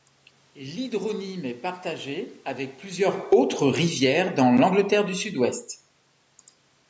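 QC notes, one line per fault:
2.99–5.67 s, automatic gain falling: the gain control judged the input too loud, or its background noise too strong, and lowered its gain by about 6 dB over these 2.7 seconds, so the speech sinks together with the room noise beneath it, unlike a talker moving, which is also audible near the same moment and leaves the background untouched. The waveform envelope tapers steadily, and on a spectrogram the noise floor dims in step with the voice.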